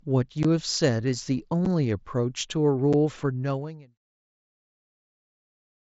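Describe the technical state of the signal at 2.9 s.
Right at 2.93 s there's unconcealed Bluetooth headset packet loss: about 7.5 ms of the wideband mSBC link just drops out, which fits a single lost packet between headset and phone. Nothing fills the gap, so you get a tiny hard-edged hole in the speech.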